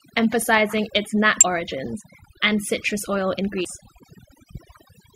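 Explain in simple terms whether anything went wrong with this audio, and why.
Two things went wrong in this speech recording.

The first is overdone noise removal, heard all the way through. A noise reduction tool was pushed too hard. It switched off parts of the sound it mistook for background noise. Quiet parts of the voice went too. The background drops and breaks up into twinkling specks.

The second is damaged data in a compressed stream. Parts of the compressed file were corrupted. The decoder could not read those stretches properly and briefly lost its place. The first brief blip is at 1.41 to 1.43 s, between "emphasising its" and "origins and citrus oil". The second is at 3.65 s, after "origins and citrus oil".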